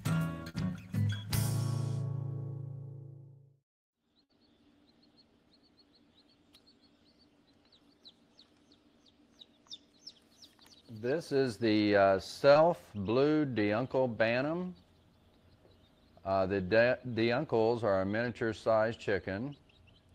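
Short concealed packet loss at 0.49 to 0.56 s: about 40 ms never arrived, so the receiver extended the preceding sound, leaving a brief smear. A burst of packet loss at 4.24 to 4.31 s drops about 60 ms; the last sound is stretched and faded, then audio resumes past the gap. Another short concealed packet loss at 12.53 s, only about 20 ms, gives a brief smear.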